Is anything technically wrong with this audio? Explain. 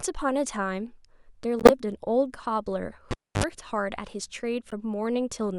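Yes. The speech is hit by two kinds of fault.

Corrupt frames were decoded at 1.59 to 1.71 s and again at 4.70 to 4.73 s. Flipped bits in compressed frames went to the decoder uncorrected, so misread gains and codes sent energy to the wrong frequencies for each damaged frame. The first event spans a handful of consecutive frames and bursts out loud, peaking around -5 dBFS, as a harsh chirp of noise. The second covers a couple of frames and is a faint blip, roughly 30 dB down.

At 3.11 to 3.44 s, a cable was pulled and plugged back in while live. Breaking the connection gives a pop, then about 280 ms of near silence. As the plug goes back, only the tip touches at first, picking up 50 Hz mains hum for about 65 ms as a buzz. A second pop follows when full contact restores the sound.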